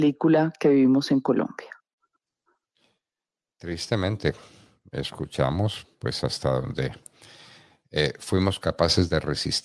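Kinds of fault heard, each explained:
No technical faults can be heard in this speech recording.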